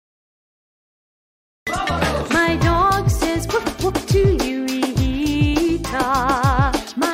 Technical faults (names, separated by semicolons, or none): cut-off start